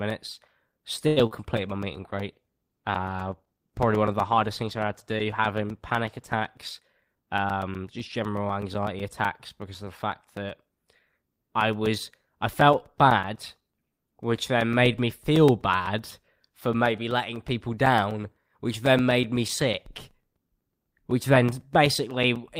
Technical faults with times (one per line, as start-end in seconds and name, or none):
0.10-22.60 periodic USB or driver dropouts
1.07-1.19 short stall from a late packet
1.26-1.33 short concealed packet loss
1.53-7.25 call bitrate drop
6.80-7.45 jitter buffer speed-up